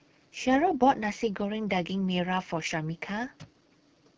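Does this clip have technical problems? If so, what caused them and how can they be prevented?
Yes. Throughout the speech, the AMR wideband (HD Voice) codec is running at one of its lowest rates, which fits the 8.85 kbit/s mode. Its vocal tract model gets too few bits, so the voice turns rough and raspy, with noisy upper frequencies. Using 12.65 kbit/s or higher prevents this.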